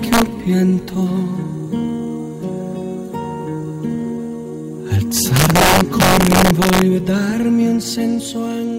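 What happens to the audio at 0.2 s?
Integer overflow strikes from 0.13 to 0.22 s: peaks driven about 2 dB past the integer limit wrap to the opposite sign instead of being held. Each wrap is a violent crack, harsher than clipping, seen as full-range vertical jumps in the waveform and broadband streaks on a spectrogram.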